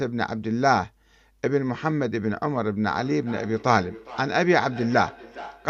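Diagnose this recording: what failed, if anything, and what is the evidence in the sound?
Feedback echo between two devices begins at 2.95 s and runs to the end of the clip at 5.70 s. This is a call-processing failure. The speech comes back as a delayed copy at an interval of roughly 400 ms, with the repeats peaking about 16 dB below the direct speech. Two devices in the same room share the call. One plays the other's audio aloud, and that microphone captures it again. Neither device's echo canceller can remove sound coming from the other device's speaker.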